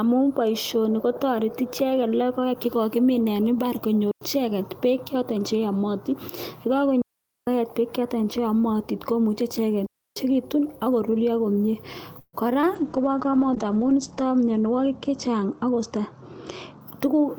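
Between "imbaar konyor" and "icheket beek", at 4.11 to 4.21 s, the speech drops into a clean hole of near silence lasting about 100 ms. This is a digital wireless dropout. The radio link lost too much data, so the receiver muted behind a very short fade. The same thing happens twice more: after "che yamatin ye" from 7.02 to 7.47 s (about 455 ms), and from 9.86 to 10.16 s (about 300 ms). What marks these as digital mutes, rather than an analogue wireless fault, is that no burst of hiss or crackle comes before or after the silence.

Just after "ak koruryo komnye", from 12.19 to 12.35 s, comes a call audio freeze. The last sound is stretched into a fading buzz or hiss for about 138 ms, and the final 30 ms or so of that are silent. Then the speech picks up exactly where it left off. Nothing is lost, but 138 ms of extra delay has been put into the call. The likely cause is that packets were held up and the jitter buffer ran empty. 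Unlike the wireless dropouts, the gap is filled with a continuation of the sound instead of a clean mute.

At 12.61 to 12.65 s there is a brief smear of about 34 ms. This is short concealed packet loss. A few hundredths of a second never reached the decoder in time, so the receiver extended the preceding sound and blended it back into the real audio. Unlike the freeze, nothing is delayed here. About 20 ms of speech is simply gone, covered by the filler.

From 12.76 to 16.87 s a call bitrate drop takes hold. The encoder falls from 32 kbps to 11 kbps and stays at its lowest for about 1.5 s. Over the same stretch the audio bandwidth narrows from 20 kHz to 8 kHz. The speech turns muffled and roughly coded, with a watery edge. It differs from the earlier faults because there are no gaps at all. The whole passage simply loses its top end and its detail until the bitrate recovers.

Overlapping that, from 14.65 to 15.99 s, a jitter buffer speed-up makes the speech run at about 106% of normal speed. 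Many short pitch-period slices, roughly a tenth of a second in total, are cut out to shrink a buffer that had grown too full. The speech sounds slightly hurried but keeps its pitch, which separates this from a playback-speed error, where the pitch would rise along with the tempo.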